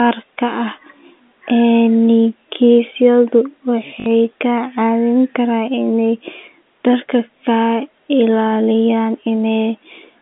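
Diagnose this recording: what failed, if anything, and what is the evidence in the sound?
At the network stage, packets were dropped and the receiver covered the gap with packet loss concealment by repeating the last packet. From 4.00 to 4.06 s, 60 ms of speech, which fits three 20 ms packets, stutters robotically over the narrow G.711 telephone band.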